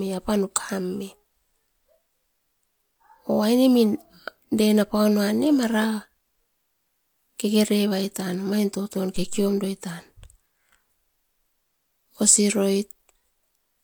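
At 9.16 s, right after "kekerevairatan omain toton", a phantom power thump interrupts the speech and lasts until about 9.55 s. A supply voltage was switched on or off while the input was live, and that sudden DC step leaked through the coupling capacitors as a deep, low thud that dies away with a decay of about 88 ms. On the waveform it shows as a lopsided low-frequency swing that settles back toward centre. On a spectrogram it appears as a brief burst of energy concentrated at the bottom of the frequency range.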